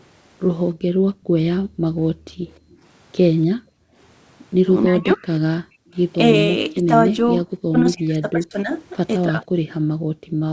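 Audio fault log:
0.74–10.52 s, background gated by the echo canceller: The room tone falls away during 0.74–2.83 s, for roughly one and a half seconds in total, again at 3.58–3.97 s, and from 9.65 s to the end. At its deepest the background drops by about 40 dB. The echo canceller pulls the microphone gain down hard while the far end's loudspeaker is active, so the ambience vanishes and then returns when the suppression releases.
2.53–2.74 s, echo leak: A faint delayed copy of the sound comes through, trailing by 293 ms and sitting around 40 dB below the main signal. The likely cause is a loudspeaker-side echo canceller that did not fully remove what its microphone picked up and sent that residue back down the line.
4.85–9.37 s, speech suppressed in double talk: The talker's speech sags or breaks into pieces at 4.85–5.28 s (down roughly 35 dB), 5.69–5.86 s (roughly 40 dB), 6.74–8.73 s (roughly 30 dB, about a second affected in total) and 9.24–9.37 s (a milder dip of around 10 dB). 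This is likely because both sides were speaking together and the canceller, unable to separate the near talker from the echo, attenuated both.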